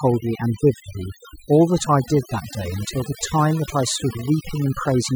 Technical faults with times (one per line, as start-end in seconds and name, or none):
0.00-5.15 overdone noise removal